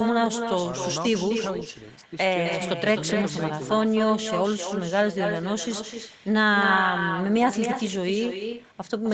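From start to finish the speech carries echo with no canceller. The far end is playing the call out loud, its microphone catches that playback, and nothing strips it out before it's sent back. So every phrase returns roughly a third of a second later, only about 6 dB down. The copy sounds thinner, and like everything else here it has nothing above 8 kHz.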